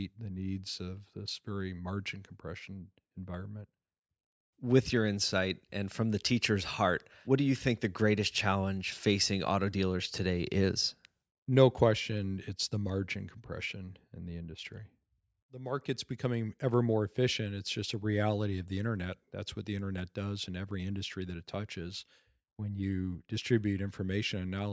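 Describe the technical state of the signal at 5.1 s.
At 5.1 s the speech signal is intact, with no audible technical fault at that moment.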